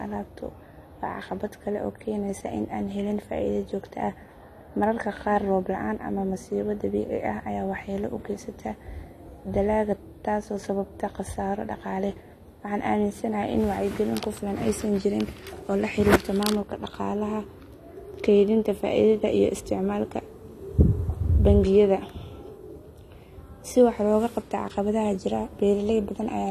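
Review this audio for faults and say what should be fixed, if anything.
Throughout, nothing sounds above 14 kHz and sibilants warble and fizz, likely AAC compression at a low bitrate near 32 kbps. A plain low-pass filter would dull the top without that swirling smear. Re-encode from the original source at a higher bitrate, or use a lossless format, so the coder keeps the full band.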